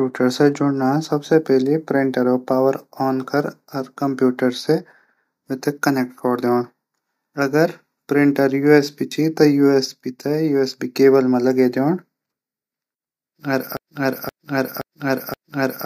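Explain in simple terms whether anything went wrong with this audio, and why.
From 13.77 s to the very end, the same half-second of speech, about 0.52 s long, plays four times back to back. This is a broken-record loop, likely caused by playback or streaming stalling and resending its last fragment, so the rest is lost.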